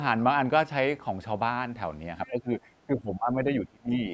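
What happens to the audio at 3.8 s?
At 3.8 s the speech is caught in speech suppressed in double talk, from 2.87 to 3.93 s. It dips as deep as about 30 dB, most likely because the echo canceller mistook it for loudspeaker echo.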